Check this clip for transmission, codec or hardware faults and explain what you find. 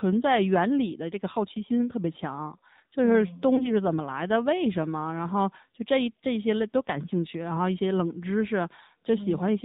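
Two faults are present: narrowband mobile coding across the whole clip and a brief dropout mid-way.

Throughout, the voice sounds buzzy and synthetic, with nothing above 4 kHz. This is the AMR narrowband mobile codec. It models the vocal tract and drives it with a few pulses per 5 ms subframe, and the plainly audible coarseness fits a low mode around 7.4 kbps.

From 3.56 to 3.73 s the voice briefly dips and warbles, then returns rough for a moment. These are lost AMR speech frames. A corrupted frame was concealed by repeating the previous pitch and vocal tract settings at lower gain, and the short disturbance points to a single missing 20 ms frame.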